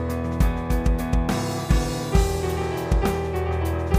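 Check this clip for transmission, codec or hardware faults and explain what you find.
Nothing faulty can be heard anywhere in this clip.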